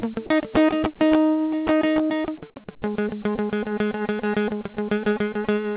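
Nothing's wrong with this bit of music: it's come through a call path whose codec keeps everything below about 4 kHz, just as a telephone-grade line like that should.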